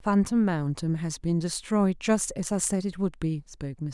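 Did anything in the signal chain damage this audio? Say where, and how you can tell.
No, nothing in the signal chain damaged this recording. No stage, from capture through to playback, left a mark that can be heard anywhere in the speech.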